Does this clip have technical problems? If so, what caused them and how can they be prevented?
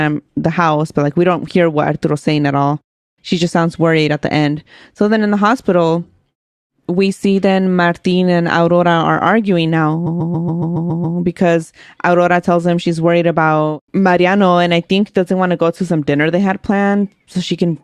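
Yes. Just after "arguing now", from 10.06 to 11.17 s, the speech stutters: a 139.3 ms block, consistent with a run of about six compressed frames, plays eight extra times, adding 1.1 s. These are repeated frames: the same frames were written or sent again. Unlike dropouts, nothing is lost; identical copies stretch the timeline. Prevent it by deduplicating frames by sequence number or timestamp before decoding.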